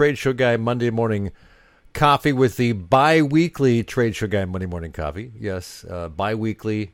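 No technical faults can be heard anywhere in this speech recording. There is nothing here that calls for a timestamp or an explanation of a cause.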